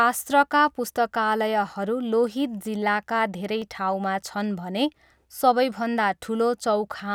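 A speech recording with one sharp click at 3.62 s, just after "लोहित जिल्लाका धेरै". It is likely dropped samples: a fraction of a millisecond is missing, so the waveform jumps abruptly.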